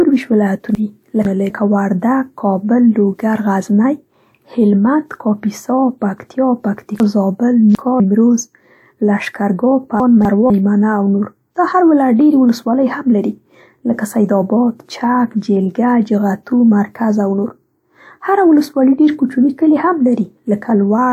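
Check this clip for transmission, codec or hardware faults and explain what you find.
Three places in this speech have chunks out of order, at 0.75 to 1.5 s, 7.0 to 8.0 s and 10.0 to 10.5 s. In each, one 250 ms chunk reached the output late and was played after the chunks meant to follow it: two chunks later in the first, three in the second, one in the third. No audio is missing, but the sequence is scrambled, so each stretch sounds jumbled.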